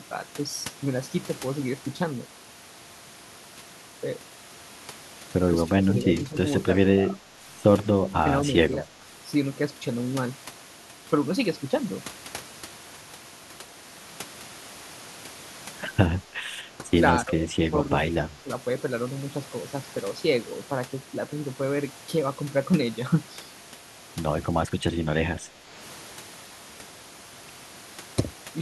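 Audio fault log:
5.68–6.36 s, 6.92–7.41 s, 7.96–8.28 s, 8.82–9.06 s and 16.27–18.52 s: speech suppressed in double talk. The speech dips in brief patches. The drops are about 5 to 15 dB, deepest near 8 s. The last stretch is the longest, with about 0.7 s affected. The likely cause is an echo canceller that took the talker for loudspeaker echo while the far side spoke, and turned both down.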